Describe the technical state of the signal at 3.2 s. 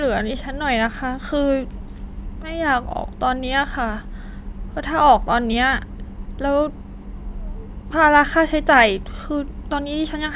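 The speech signal at 3.2 s is intact, with no audible technical fault at that moment.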